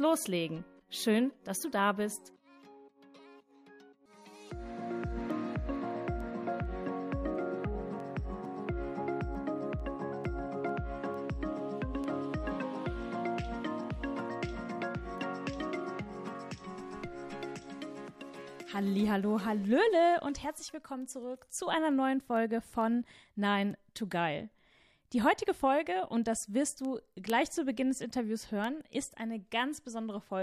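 From 0.37 s to 29.99 s, word clock ticks recur about every half second. A receiving clock drifting against the sender's drops or repeats single samples, giving sharp ticks.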